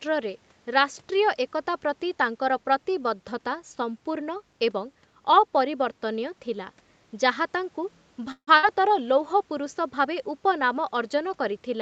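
At 8.31 s the audio stalls in what is most likely a call audio freeze: packets seem to have been held up in transit, so the jitter buffer ran dry and the receiver had to improvise. It stretches the last sound into a fading buzz or hiss for about 160 ms, the final 80 ms of which is silence, before resuming at 8.49 s exactly where it left off. The result is a pause inserted into the speech, with nothing lost and everything after it arriving 160 ms late.

Moments later, at 8.57 s, comes a burst of packet loss. Roughly 60 ms of audio never arrived in time to be played, so the receiver covered the hole by extending and dimming the preceding sound for about 54 ms, heard as a brief, fading buzz or hiss. At 8.65 s the speech picks up again further along, and the stretch that should have filled that gap is simply gone, leaving a small jump in the flow. Throughout, the sound is band-limited at 8 kHz, consistent with an Opus call link at around 32 kbps.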